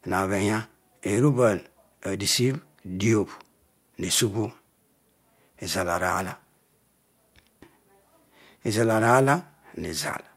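Nothing is technically wrong with this speech recording.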